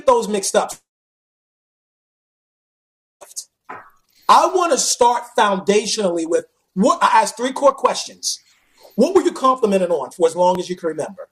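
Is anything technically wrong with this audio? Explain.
Yes. From 0.71 to 3.23 s there is a long network dropout, likely caused by about 2.5 s of audio failing to arrive. A brief fading buzz or hiss continues the last sound, then about 2.4 s of silence follows. Unlike a short glitch, the gap is long, and the sound resumes with the missing part gone.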